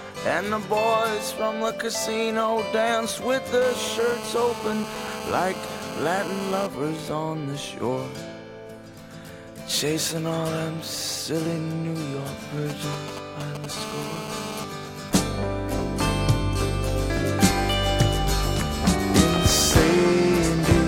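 A hard, raspy buzz at about 217 Hz, rich in harmonics and unrelated to the audio, runs steadily from 3.62 to 6.67 s, about 10 dB below the signal. This is GSM phone buzz: a nearby 2G phone in a call transmits 217 bursts a second, and the audio circuit rectifies the radio pulses.

From 12.70 to 13.66 s a galloping dit-dit-dit of short 217 Hz buzzes appears at a similar level. These are GSM signalling bursts, the short groups of transmissions a phone sends while setting up, picked up and rectified the same way. The steady buzz then returns from 13.77 to 14.65 s.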